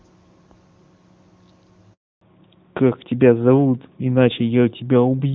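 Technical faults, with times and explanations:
1.93–2.21 s, handover gap: the speech fades within a few tens of milliseconds and stays silent for 280 ms while the call moves between networks and no speech frames arrive. Unlike packet-loss concealment, nothing is smeared or repeated. It is clean silence until the new link starts.
2.21 s to the end, fallback to narrowband: from the moment sound returns, nothing remains above 4 kHz, so the speech turns duller and rougher than the crisp HD Voice before the gap. The abrupt, lasting band cut fits a switch to a narrowband codec, not a gradual bitrate dip.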